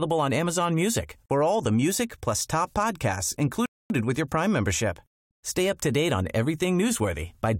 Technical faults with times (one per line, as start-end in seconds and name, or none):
3.66-3.90 rebuffering stall